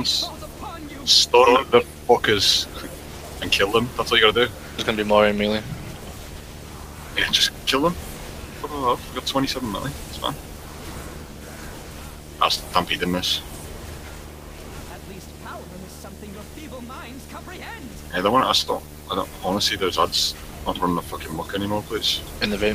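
A video or display buzz runs under the audio from start to finish. Its fundamental sits at 75 Hz, with a hash of harmonics stacked above it. That rate matches the field rate of a screen refreshing 75 times a second. The buzz comes from a monitor or video cable coupling its picture signal into the audio wiring. It sits around 20 dB below the wanted sound.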